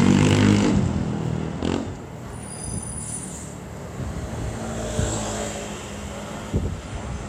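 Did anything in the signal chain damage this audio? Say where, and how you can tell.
Yes. From 1.79 s to 6.99 s the sound fades over about half a second into a roughly 3 dB quieter version with faint hiss around 35 dB down. This is the reception stage: digital radio blending to analogue, crossing to the station's FM feed.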